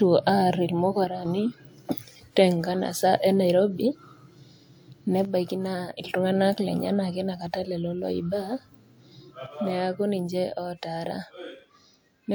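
At 1.04 to 1.25 s, 5.25 to 6.05 s, and from 9.46 s to the end, the speech suddenly drops by about 6 dB. The first two times, it snaps back just as abruptly. This is one channel dropping out, likely one side of a stereo feed going silent before the mono sum, which halves everything the two sides shared. On a waveform the envelope steps down to half height with square edges. A spectrogram shows the same patterns, evenly dimmer across all frequencies.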